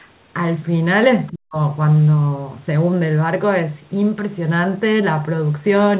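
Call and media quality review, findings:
Other side's voice leaking through, 1.27–1.32 s: brief, very faint second voice under the talker. Likely residual echo: loudspeaker playback reaching the mic and not fully cancelled by the AEC.

Speech suppressed in double talk, 1.31–1.58 s: talker's level drops steeply, near cut-out, for about a third of a second. AEC likely misread near-end speech as echo during overlap and attenuated both.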